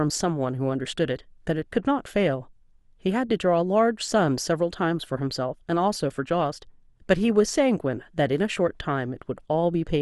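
A speech recording with no technical fault to report. Nothing in it needs a time, a value or a cause.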